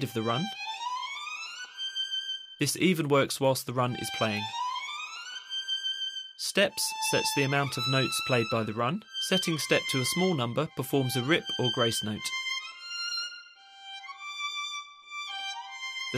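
No technical faults are audible anywhere in the recording.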